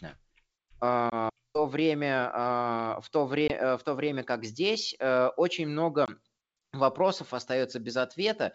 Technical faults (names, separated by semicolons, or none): packet loss on an ADPCM call